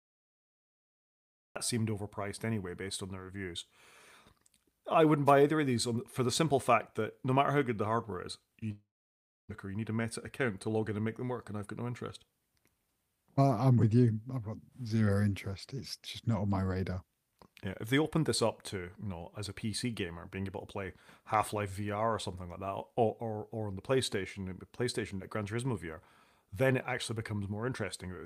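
Cut-off start, 0 to 1.56 s: the speech clip opens in digital silence and then jumps abruptly into sound mid-phrase just before "seemed overpriced anyway based", with no natural attack. Wireless microphone noise hit, 5.26 to 5.32 s, between "I wouldn't" and "either of these for": a brief swish of receiver static as the FM radio link fades through cancelling reflections. From 8.71 to 9.53 s the sound trails off into about 0.65 s of silence and resumes with roughly 0.6 s missing, likely a long network dropout that the receiver briefly concealed before going quiet. Jitter buffer speed-up, 9.66 to 11.58 s, ending before "I've got no interest": the receiver repeatedly trims tiny pitch-period slices, about 150 ms in all, so speech runs 8% faster at unchanged pitch.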